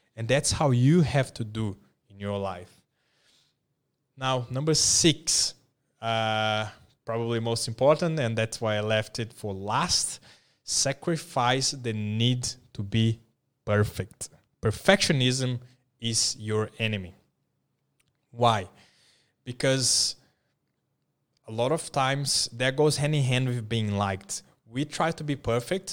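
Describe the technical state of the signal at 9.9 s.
At 9.9 s the signal is intact, with no technical fault present at that moment.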